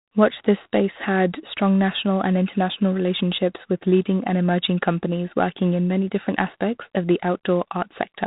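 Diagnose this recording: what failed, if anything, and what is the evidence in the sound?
The fault sits at the codec stage: G.726 ADPCM, audible for the whole speech clip. Everything above about 3.8 kHz is gone, and a harsh, rasping hiss rides on the speech and rises and falls with its level. That is quantisation noise in the coded prediction error, and its density points to 24 kbit/s, three bits a sample. Because the noise follows the speech, this is codec damage, not plain band-limiting or a steady background hiss.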